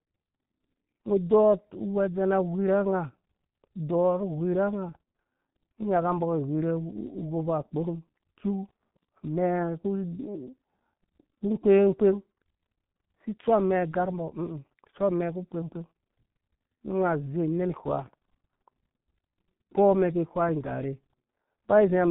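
From start to finish the speech has been through the G.723.1 codec, and the damage is heavy. Nothing gets through above 3.8 kHz, so the top end is gone and everything sounds muffled. The codec's voice model updates slowly, which smears consonants and leaves a hoarse, grainy edge on the voice. That level of squashing fits a bitrate of around 6.3 kbit/s.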